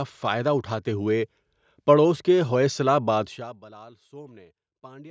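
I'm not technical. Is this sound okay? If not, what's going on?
No, there's one problem: zipper noise, from about 3.22 to 3.63 s, right after "پڑوس کے ہوئسلہ". The speech is being turned down a lot there, but instead of a smooth fade the volume drops in lots of tiny jumps, roughly a hundred a second. Each jump makes a little click, and together they sound like a fast ticking or zipping riding on the speech while it gets quieter.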